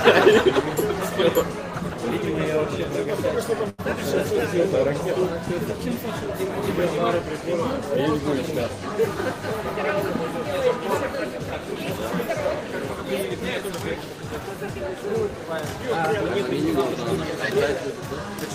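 At 3.69 to 3.80 s there is a short stall from a late packet: the buffer ran dry, so about 90 ms of the preceding sound is held and stretched, nothing lost, but latency grows by 90 ms.

From 11.60 to 14.76 s a jitter buffer speed-up trims tiny pitch-period slices to shed a backlog, running the audio at 102% speed, same pitch, removing roughly 70 ms in total.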